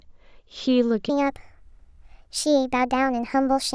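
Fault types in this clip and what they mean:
Wrong sample rate: from about 1.09 s to the end, the speech jumps to roughly 1.38 times normal speed and about 5.5 semitones higher, sounding hurried and chipmunky. That fits 16 kHz audio being played back at 22 kHz without any conversion.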